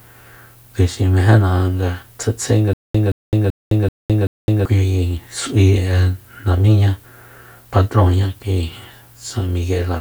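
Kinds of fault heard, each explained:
Stutter with silent gaps: playback likely stalled and, on each retry, replayed its last fragment before running dry. From 2.73 to 4.65 s, a 173 ms burst of speech returns five times, every 384 ms, separated by 211 ms of digital silence, and the intervening audio is lost.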